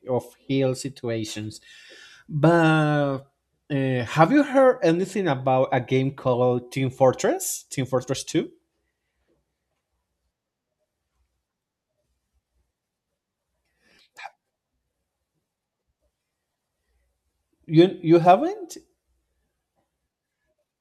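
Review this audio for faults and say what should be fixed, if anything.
No faults turn up in this audio, so nothing needs to be fixed.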